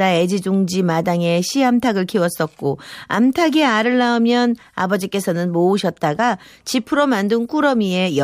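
No audible faults anywhere in the speech.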